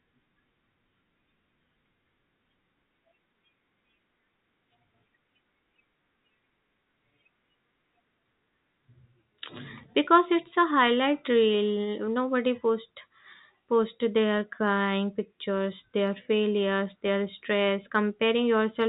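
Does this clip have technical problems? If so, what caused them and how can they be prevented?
No, there's nothing wrong here; the speech simply carries the narrow telephone-band sound of a G.711 call, with nothing above about 4 kHz, which is just how that codec works.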